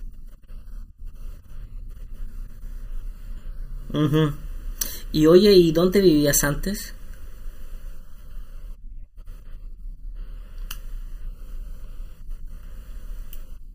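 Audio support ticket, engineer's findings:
Channel delay (comb filtering) throughout the speech. Hollow, phasey tone, fixed notches starting around 700 Hz and repeating evenly upward. One channel lags by under a millisecond. Common content cancels when summed to mono. Check channel alignment at mono fold-down.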